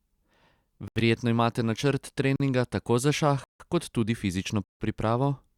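The speech drops to a block of digital silence four times. The first is 0.88 to 0.96 s, about 80 ms. The next is 2.36 to 2.40 s, 40 ms, right after "imate načrt". Then 3.44 to 3.60 s follows "tako za šah", 160 ms, and 4.64 to 4.80 s comes after "šah kot tudi fizično", another 160 ms. The signal cuts out and back with no fade. Even the shortest is long enough to read as a hole rather than a tick, and the longer ones as real holes. That points to the output buffer not getting filled in time.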